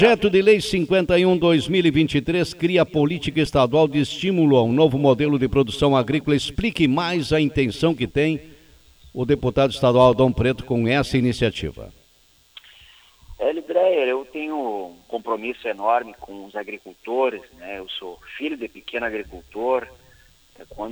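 At 3.46 s there is a repeated buffer: fresh audio reached the output late, so the device replayed its last block three more times. Each repeat lasts about 2.7 ms, which fits a 128-sample buffer, and about 7 ms of real audio is lost. At that size the repeats come across as a click or brief buzz with hard joins rather than an audible stutter. Unlike a dropout, the gap is filled with recycled sound instead of silence.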